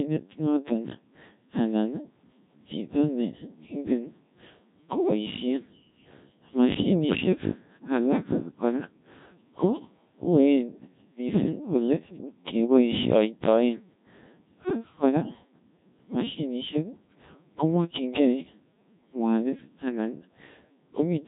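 From start to finish the speech has passed through a Codec 2 vocoder, and the heavy damage points to one of its lowest modes, around 1.3 kbit/s. Instead of carrying the waveform, the codec sends only pitch, voicing, energy and a coarse spectral envelope, and the decoder rebuilds the voice from sine waves. The result is robotic and buzzy, with a smeared, synthetic texture and nothing above 3.8 kHz.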